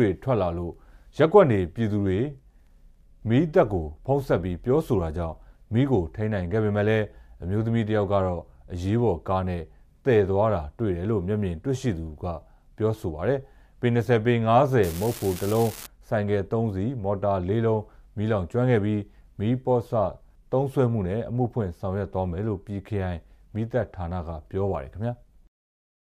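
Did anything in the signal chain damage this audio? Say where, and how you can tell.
Yes. An unreliable data bit damaged the audio at the converter or its digital data line, from 14.83 to 15.86 s. A steady crackle appears there, even in quiet moments. One marginal bit flips in random samples, each adding a fixed spike of about -19 dBFS.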